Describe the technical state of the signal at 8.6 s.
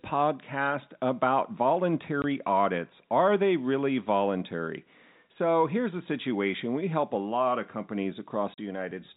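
Two consecutive packets appear to have gone missing in transmission, and the receiver filled the gap with plain silence instead of concealing it. The result is a 40 ms dropout from 8.54 to 8.58 s, which fits two 20 ms packets. The speech cuts off abruptly and resumes just as abruptly, with hard edges at both ends. Around the hole, the G.711 telephone band stops at 4 kHz.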